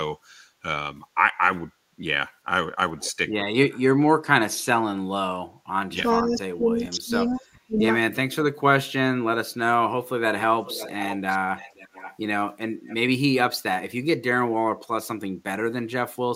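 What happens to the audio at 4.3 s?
Nothing goes wrong at 4.3 s; the speech carries straight through that moment with no dropout, click, distortion or other fault.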